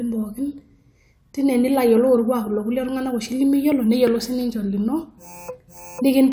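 No technical faults can be heard anywhere in the speech.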